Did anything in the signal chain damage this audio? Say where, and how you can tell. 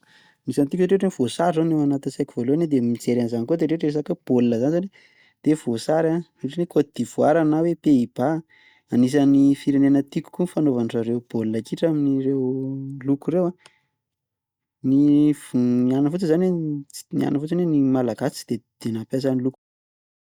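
No, nothing in the signal chain damaged this audio; the only level change is an ordinary editor's fade-out at the very end, from about 19.5 s to 19.56 s.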